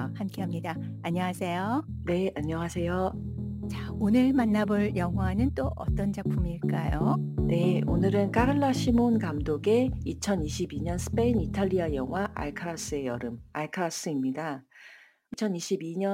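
Throughout the clip, crude rate conversion dropped or repeated samples without filtering, in a pattern that fits a 48 kHz to 44.1 kHz change. The resulting error, about 30 dB below the signal, adds a gritty, inharmonic fizz that follows loud and high sounds.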